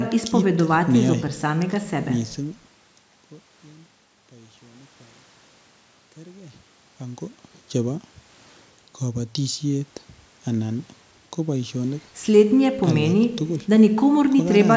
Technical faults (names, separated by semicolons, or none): none